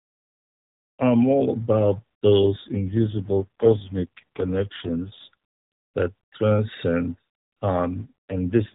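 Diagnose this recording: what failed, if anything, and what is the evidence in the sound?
The failure is at the network and codec stage: an AMR rate drop. From 2.40 to 5.34 s, and again from 8.00 s to the end, the speech turns buzzier and more synthetic. There is no dropout and the band stays the same. This fits the link forcing the AMR-NB encoder down from its 12.2 kbps mode to about 4.75 kbps, moving bits into error protection. On a spectrogram the 4 kHz ceiling holds, but harmonics and formants smear. The waveform shows no gap.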